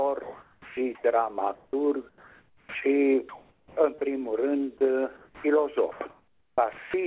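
From 0.23 s the sound gives way abruptly to a flat, steady hiss, and about 0.28 s of real sound vanishes under it before the hiss ends at 0.77 s. This is sound dropped by the voice detector. The sender likely judged that stretch to be background, stopped transmitting, and left the receiver to synthesise comfort noise across the 0.54 s gap until the detector triggered again.

Over the same opening stretch, 0.23 to 1.04 s, the background loses its texture and becomes a smooth, uniform noise bed before the real ambience returns. This is comfort noise in place of the background. The sender likely paused transmission during what it took for silence, and the receiver filled about 0.63 s with generic noise roughly shaped like the room rather than the room itself.

From 1.55 to 2.75 s, 3.29 to 4.19 s, and 4.78 to 6.94 s the sound turns choppy. Edges and quieter moments cut out. This is sound chopped by the voice detector. 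The sender likely toggled transmission on and off repeatedly within each stretch, replacing about 0.84 s, 0.51 s and 1.08 s respectively with comfort noise. Throughout, nothing reaches above 4 kHz, which fits a narrowband telephone-grade call codec.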